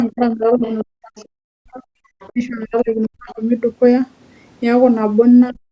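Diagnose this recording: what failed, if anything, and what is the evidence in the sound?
Call processing: speech suppressed in double talk, with the talker dropping about 25 to 40 dB at 0.08–0.63, 0.83–1.82, 2.32–3.4 and 5.51–5.72 s, likely the echo canceller ducking everything during overlap.

Also call processing: the other side's voice leaking through as faint scraps about 25 to 30 dB under the talker at 0.62–0.84, 1.16–1.27 and 2.2–2.32 s, likely loudspeaker echo the canceller didn't fully remove.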